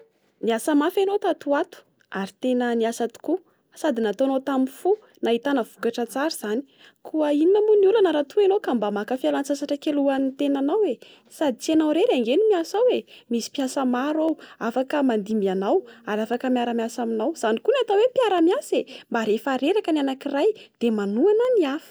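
From about 0.97 s to 21.45 s the speech carries periodic USB or driver dropouts, spaced every 1.02 s. At each one a tiny sliver of audio, well under a millisecond, is skipped rather than replaced with silence, leaving a small, regularly timed tick. The strict regularity of these ticks, heard only where sound is present, points to a recurring task stalling the driver, not to random clicks from a damaged source or a loose cable.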